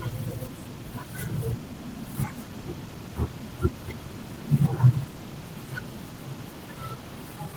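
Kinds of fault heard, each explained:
Clock drift between sender and receiver: the sender's clock runs roughly 5 percent fast against the receiver's, so the jitter buffer keeps overfilling, and throughout this speech small timing hiccups recur at uneven intervals instead of the flow staying smooth.
Repeated timing corrections: to stay in step, the receiver keeps cutting short pieces from about 0.1 to 7.49 s, all in the same direction and unevenly spaced, at about 105 percent speed.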